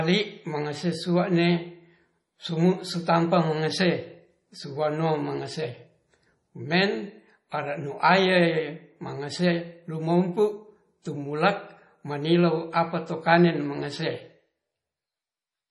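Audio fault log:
Throughout: MP3 compression damage. The speech sounds watery and swirly, and nothing is present above 11.4 kHz. Weak detail flickers on and off between frames, and attacks smear. This heavy damage is likely from MP3 encoding at a bitrate near 32 kbps.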